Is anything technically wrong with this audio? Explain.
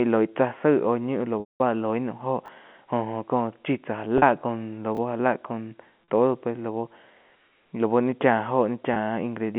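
Yes, the speech has two kinds of fault over a G.711 A-law telephone line limited to about 150 Hz to 3.4 kHz. Packet loss with pitch repetition occurs at 1.4 to 1.6 s, 4.18 to 4.22 s, 6.04 to 6.08 s and 8.94 to 8.96 s. Each time, the receiver loops the last pitch period. The short 20 to 40 ms gaps sound like a buzzy held note. The 200 ms gap fades to silence. A spectrogram shows frozen, evenly spaced harmonics that taper off. Chunks are out of order at 2.46 s, where a 10 ms chunk plays one slot late, and at 4.95 s, where one plays two slots late. Each sounds like a brief jumbled moment, and the waveform shows abrupt discontinuities at the joins.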